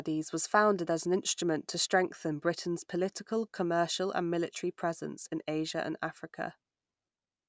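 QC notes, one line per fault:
No faults detected in this clip.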